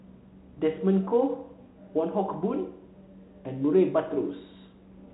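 No faults are audible in this speech, and the G.711 telephone coding shows only its expected band limit, with nothing above 3.8 kHz.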